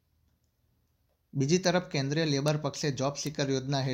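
Bits flipped in the stored or transmitted samples of this speech, making the value leap by a power of two and snap straight back. The result is a bit error spike: a sharp, broadband tick that ignores the speech around it. It happens at 1.65 s (about -21 dBFS), at 2.48 s (about -15 dBFS, with two adjacent samples hit) and at 3.27 s (about -15 dBFS).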